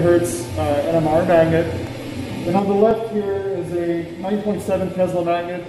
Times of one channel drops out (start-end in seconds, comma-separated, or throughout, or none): 2.59-5.69